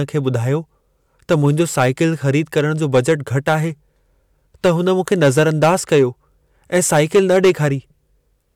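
Speech with hard clipping in four stretches, 1.31–2.59, 2.95–3.55, 4.65–6.03 and 6.75–7.66 s, overdriven by about 8 dB (about 6 dB in the second), flattening peaks into harsh fuzz.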